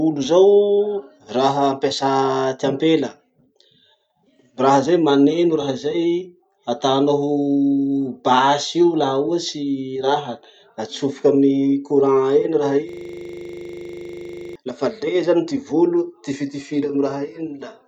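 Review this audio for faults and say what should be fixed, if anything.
From 12.89 s to 14.56 s the speech stops and a single 40 ms slice repeats about 42 times, giving a rapid, rattling buzz at 25 Hz before normal audio resumes. This is a system hang loop: the computer or its audio driver stalled, and the sound hardware kept replaying the same ring buffer, which fits a buffer of about 40 ms. To prevent it, fix the driver or system stall and have playback output silence when the buffer underruns.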